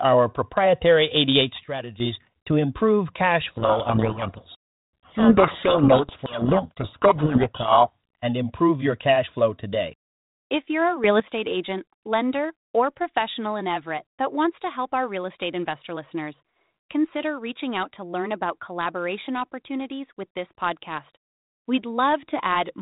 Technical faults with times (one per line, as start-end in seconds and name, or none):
1.64-2.00 sudden gain jump
3.57-7.97 codec payload misread
11.04-11.20 sudden gain jump